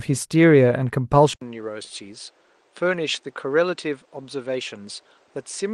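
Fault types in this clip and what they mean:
Input switched to a poorer device: Partway through, the recording input most likely moved to a different, lower-grade microphone or a headset's call mode. At 1.33 s there is a short gap of about 80 ms, and from there to the end the speech loses everything above 9.5 kHz, so it sounds duller and more closed-in. It also drops in level by roughly 5 dB and carries a new noise floor around 35 dB below the speech.
Short stall from a late packet: Between 1.83 and 1.93 s a packet arrived late and the receiver's buffer ran dry. To cover the gap it held the last bit of speech for 74 ms, then resumed exactly where it had stopped. Nothing is lost, but one sound lingers unnaturally long with a slight buzz or dip, and everything after it plays about 74 ms later than it would have.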